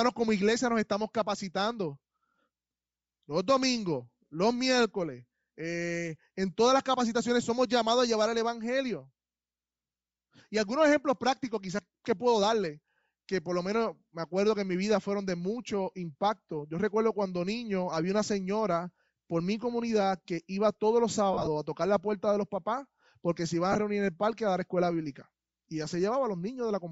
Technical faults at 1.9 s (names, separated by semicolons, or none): Bluetooth LC3 compression